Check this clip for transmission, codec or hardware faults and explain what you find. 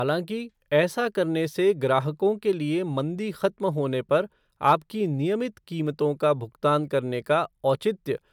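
Nothing wrong can be heard anywhere in this speech.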